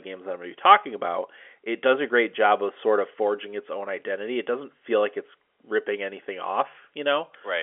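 No technical faults are audible.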